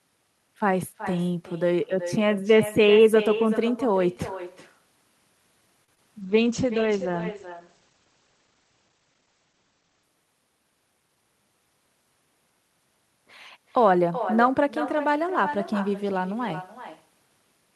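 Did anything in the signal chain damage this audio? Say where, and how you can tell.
Yes. Echo with no canceller runs throughout, at the far end's call processing: every phrase returns about 12 dB quieter and thinner, around 0.4 s late, because loudspeaker pickup is never removed.

A short stall from a late packet, at 5.84 to 5.89 s, comes from the network and jitter buffer: the last sound is held for 36 ms until the packet arrives, and nothing is lost.

Short concealed packet loss at 5.95 to 5.97 s and again at 5.97 s, also network-side: roughly 10 ms goes missing each time, and the decoder bridges it with extrapolated sound, leaving a brief smear.

A call bitrate drop from 6.22 to 10.10 s, at the codec: the rate falls from 40 to 15 kbps and bandwidth shrinks from 20 kHz to 8 kHz, so the speech turns muffled and rough.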